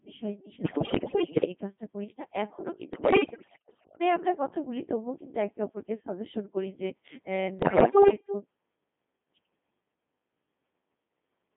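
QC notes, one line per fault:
Throughout: Codec 2 vocoder. The speech is heavily damaged and comes out robotic and buzzy, band-limited to roughly 150 Hz to 3.6 kHz, and the sound points to a rate around 2.4 kbit/s. Only pitch, voicing, level and a coarse spectral envelope survive, and the decoder rebuilds the voice from sine waves, so the original waveform is gone. What separates this from an ordinary low-bitrate codec is that steady synthetic buzz on every voiced sound rather than smearing or swirling.
0.62–1.44 s, 2.94–4.00 s, 7.60–8.34 s: bit errors on digital voice radio. In these three runs the vocoded speech breaks into bleeps, warbles and robotic gibberish, with sudden jumps in pitch, level and tone colour. Corrupted bits reach a very low-rate vocoder where each bit sets a whole frame's parameters, so one error turns into a wrong synthetic sound rather than a gap. The second run is the most garbled, and the error rate sounds to be around one bit in five there. 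Dropouts or packet loss would leave silence or repeats instead.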